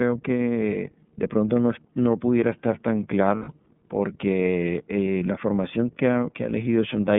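Spanish speech runs through the iLBC codec from start to finish, with plainly audible rough, synthetic coding damage and nothing outside roughly 150 Hz to 3.6 kHz; a spectrogram shows an empty region above 3.6 kHz, and the sound fits iLBC's 13.33 kbps mode with 30 ms frames. Between "no pudiera estar tan" and "porque eh la formación", lost iLBC frames at 3.36 to 3.49 s leave about 120 ms of held, buzzy vowel as the decoder repeats the last pitch cycle with noise. This shows as repeated, noisy cycles in the waveform and flat harmonic stripes on the spectrogram, with the voice returning almost at once afterwards.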